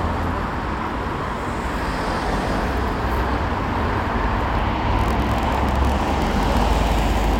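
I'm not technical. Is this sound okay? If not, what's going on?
No. From 4.9 s to 7.37 s there's a block size mismatch (padded). Tiny silent gaps in each chunk cause a 43 Hz buzz and slightly slowed sound.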